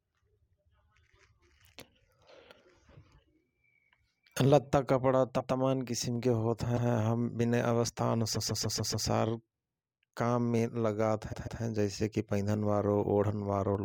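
From 0.26 to 13.75 s, a regular click recurs about every 0.72 s, some twenty in all. Its likely cause is clock drift buffer slips: mismatched device clocks, off by around 500 ppm, forcing a small block of samples to be dropped or repeated.

Repeated frames replay short stretches of speech as stutters: a 144 ms block once at 5.39 s, 120 ms at 6.76 s, 144 ms five extra times from 8.34 to 9.06 s, and twice more from 11.32 to 11.61 s.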